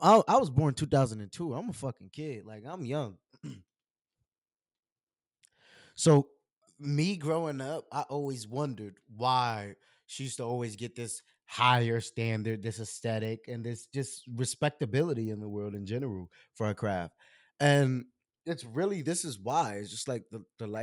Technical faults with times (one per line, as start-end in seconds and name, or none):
2.75-20.83 resampler restarted on every block